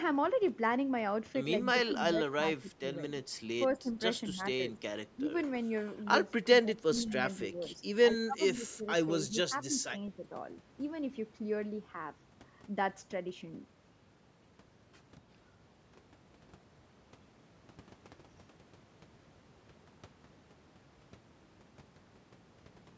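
Speech in which the talker's level repeatedly sags and breaks up: at 1.73–2.83 s, 3.79–3.91 s, 4.3–4.82 s, 5.15–5.3 s, 6.62–7.7 s and 8.24–10.25 s, parts of the voice drop by about 10 to 15 dB, the longest and deepest cuts falling in the first, fifth and sixth spans. This is likely speech suppressed in double talk, where an echo canceller, unable to tell the near talker from loudspeaker echo while both sides speak, attenuates everything at once. On a waveform the envelope shows sudden notches and gaps. On a spectrogram, already bare above 8 kHz from the call's microphone path, whole columns fade, lose their upper harmonics or blank out.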